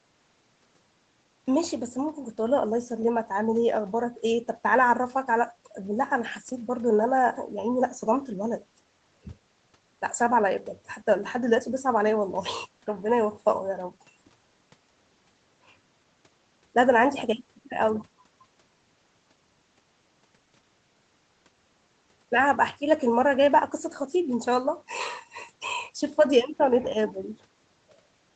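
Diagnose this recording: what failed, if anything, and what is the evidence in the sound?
Nothing in this speech recording points to a failure at any stage. The spectrum stops at 8 kHz, which is what a wideband call path sounds like when the microphone processing and the Opus codec are doing their normal job.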